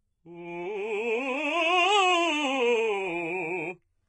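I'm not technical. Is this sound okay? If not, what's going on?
No. The music has been squeezed hard, most likely by HE-AAC compression, throughout. Only the lower range is kept properly; the top end is rebuilt from copies of lower sounds, so cymbals and bright sounds come out gritty and metallic, with nothing above 11 kHz.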